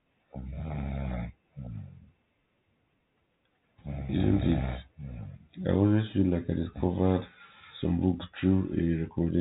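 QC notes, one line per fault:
Nothing stood out on listening to this speech, which carries the narrow, telephone-band sound of G.711 coding with no content above roughly 3.8 kHz.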